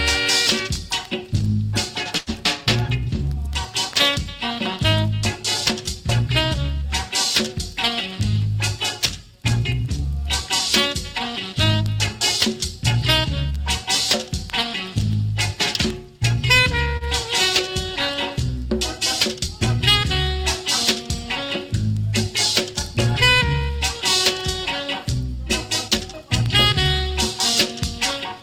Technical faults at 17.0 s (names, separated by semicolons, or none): short stall from a late packet